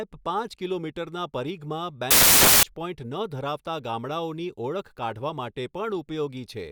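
Right after "પાંચ કિલોમીટરના પરિઘમાં", from about 2.11 s to 2.63 s, the speech drops into a half-second burst of harsh, loud broadband noise. That's samples built from the wrong bytes: the reader stitched each sample's bytes together misaligned or in swapped order, so the jittery low-order bits ended up as the big part of every value.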